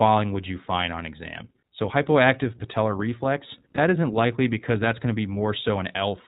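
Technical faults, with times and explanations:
Throughout: iLBC codec. The speech is narrowband, with nothing above 4 kHz. Sibilants sound dull and the voice lacks air. The coding damage is plainly audible as a slightly rough, synthetic edge. iLBC codes each short frame's excitation on its own, without leaning on the previous frame, so fine detail is approximated in every frame. The sound fits the 15.2 kbps mode, which uses 20 ms frames.
3.76–3.79 s: lost iLBC frames. Right after "hypoactive patellar reflex" and just before "isn't likely because that's", there is a brief held, slightly buzzy tone. The decoder has no data for that moment, so it repeats the last pitch cycle mixed with noise. The gap matches a single missing 20 ms frame. Because each iLBC frame stands alone, the next words come back clean almost at once.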